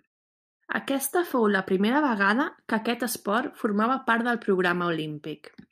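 Listening to this speech clip, nothing technically out of place stood out.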